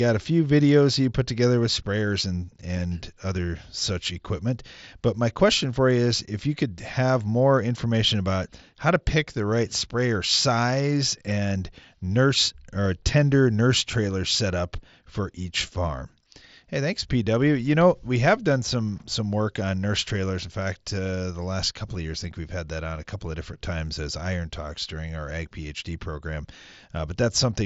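Speech, with no technical fault anywhere in it. The Bluetooth mSBC headset codec it passes through leaves its mark, with the band stopping around 8 kHz, a light grainy texture on the louder syllables, and the weakest high-frequency detail flickering in and out.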